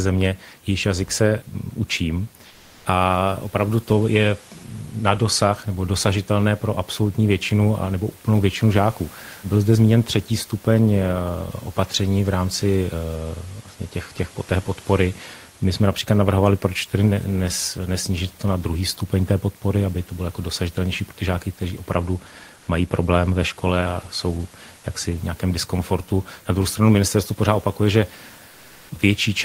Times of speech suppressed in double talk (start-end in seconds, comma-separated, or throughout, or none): none